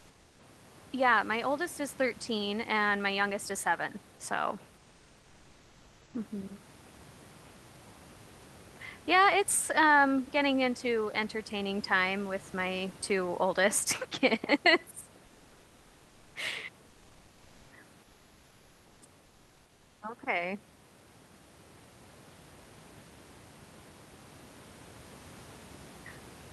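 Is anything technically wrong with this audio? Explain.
Yes. Comfort noise in place of the background at 4.81 to 6.13 s: transmission likely paused without speech, so the real room sound becomes steady, featureless synthetic noise about 2 dB quieter.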